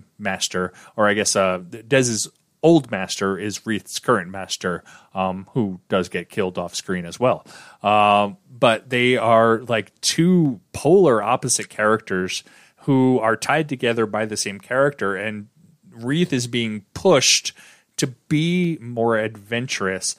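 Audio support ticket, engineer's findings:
Dropped samples, 10.45 s, 12.30 s, 18.64 s. Three isolated sharp clicks in the speech, each a thin vertical line across the spectrum. Likely cause: a fraction of a millisecond of samples missing from the stream, so the waveform jumps straight to a later value. Gap far too short to remove any audible sound; only the discontinuity is heard. Probable component: buffer handoff in the capture or playback path.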